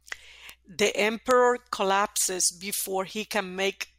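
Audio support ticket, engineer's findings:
Bit error spikes at 0.49 s, 1.31 s and 2.28 s: single sharp broadband ticks, peaking about -12, -6 and -18 dBFS, unrelated to the speech. Flipped bit in memory or digital link; sample jumps by a power of two and returns. 1.31 s spans three samples.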